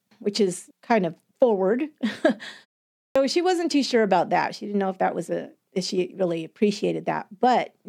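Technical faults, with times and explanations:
3.03 to 3.16 s, clipped start after a pause. The speech resumes after a gap of about 0.46 s, and the opening of "she wasn't too sure" is cut off. About 125 ms of sound is missing, so the phrase bursts in abruptly without its first sounds. The output device likely dropped into a low-power state during the silence. It then needed that time to wake and lock again. Audio arriving meanwhile was discarded.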